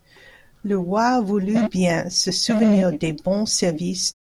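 The speech signal shows no technical faults, and the level eases down in a smooth fade-out from around 4 s to 4.14 s with no click or hard edge.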